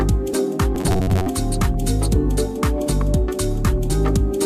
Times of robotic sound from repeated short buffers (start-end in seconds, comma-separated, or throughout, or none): 0.75-1.26